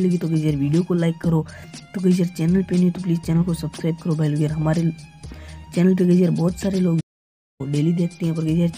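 A playback stall at 7.0 s cuts the sound to silence for about 0.59 s, likely because the player ran short of data, before it resumes at 7.61 s.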